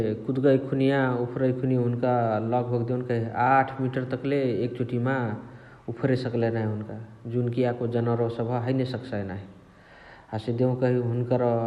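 No technical faults are audible anywhere in the speech recording.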